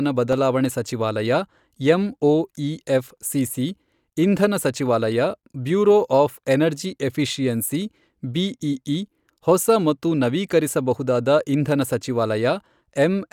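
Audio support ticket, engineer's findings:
Block of digital silence at 0.33 s. Single tick in the speech. About 1.3 ms of audio cut out, no fade. Length fits one unfilled 64-sample output buffer. Suspect audio callback missing its deadline.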